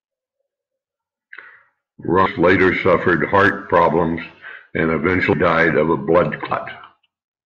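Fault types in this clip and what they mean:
Compressed frames skipped: whole chunks of the coded stream never get played, so the speech jumps forward. It happens at 2.26 s (about half a second lost) and at 5.33 s and 6.51 s (roughly 150 ms each), consistent with 32 ms frames.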